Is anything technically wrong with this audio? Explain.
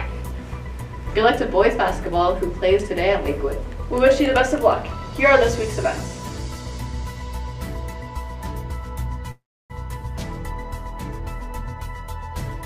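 Yes. There is a call audio freeze from 9.31 to 9.72 s. The sound holds its last moment as a brief fading buzz, then drops to silence for about 300 ms. When it resumes, it picks up exactly where it stopped, with nothing lost. This likely comes from packets stalling in transit until the jitter buffer ran dry. The receiver filled the gap instead of skipping ahead, so everything after it plays 384 ms late.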